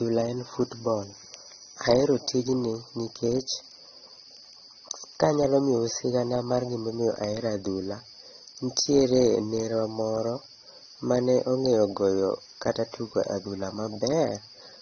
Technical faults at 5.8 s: AAC compression

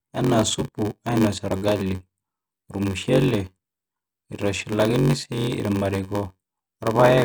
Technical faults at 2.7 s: block size mismatch (padded)

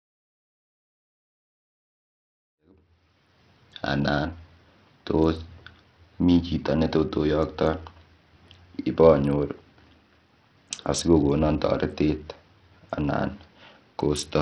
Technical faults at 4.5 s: Bluetooth SBC compression

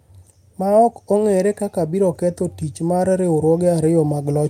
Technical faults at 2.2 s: automatic gain rising

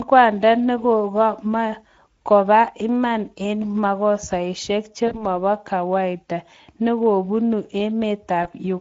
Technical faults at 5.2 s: Speex codec; VoIP packet loss concealed by the speech codec

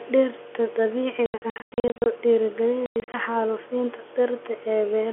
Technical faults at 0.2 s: none

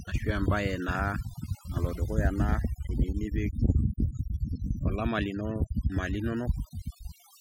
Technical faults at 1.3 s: overdone noise removal

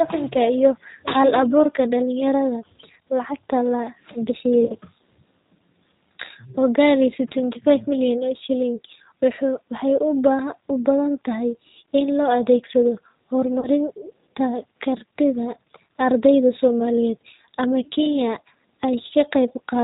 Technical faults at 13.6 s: G.729 codec; VoIP packet loss concealed by the speech codec

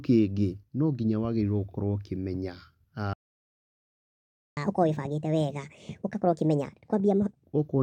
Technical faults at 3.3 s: playback stall

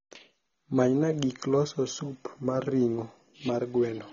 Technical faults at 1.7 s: AAC compression

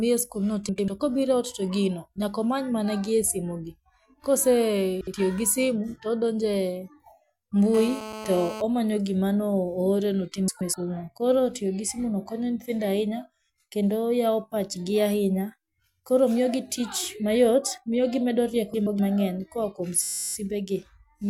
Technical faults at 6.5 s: none

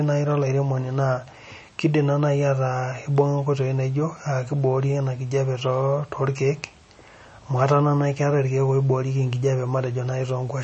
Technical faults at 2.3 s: MP3 compression

